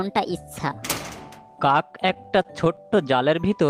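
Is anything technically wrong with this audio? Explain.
Yes. Between 2.07 and 2.99 s there are repeated stalls (stutter): packets were reaching the receiver late or more slowly than playback consumed them, so the jitter buffer kept running dry. Nine times in that span the receiver stretched the most recent sound to cover the wait, about 95 ms in total, roughly a tenth of the stretch, with the longest hold at 19 ms. Nothing is lost, but the audio drags and catches in short hiccups.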